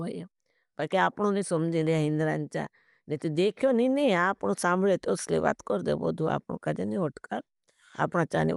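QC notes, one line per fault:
Throughout, likely Dolby Digital compression: the speech sounds dull with nothing above 11.4 kHz, and there's a rough, fluttery noise hanging around the voiced parts where starved frequency lines get filled with dither, which fits a low bitrate of about 64 kbps.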